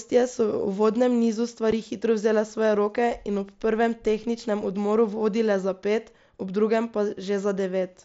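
At 1.71 s, unconcealed Bluetooth headset packet loss cuts a 7.5 ms hole in the speech, likely one dropped packet. Silence or an idle pattern fills it, leaving abrupt edges.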